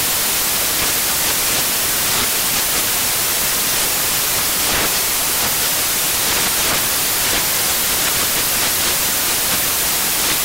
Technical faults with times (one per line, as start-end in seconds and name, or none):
0.00-10.45 samples built from the wrong bytes